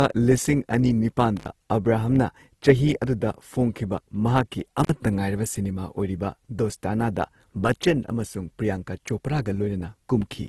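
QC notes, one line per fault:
Throughout: low-bitrate audio saved at a high bitrate. Content stops at 12.2 kHz and earlier coding artefacts remain, likely from a very low-bitrate first encode later re-saved as high-bitrate MP3.
1.37–1.47 s and 4.84–4.89 s: intermittent contact. Sound drops out for about 61 ms between "ꯂꯤꯁꯤꯡ ꯑꯅꯤ" and "ꯑꯕ꯭ꯔꯥꯍꯝꯅ ꯆꯍꯤ ꯑꯗꯨꯗ", then for about 46 ms, with crackle as the line opens and recloses.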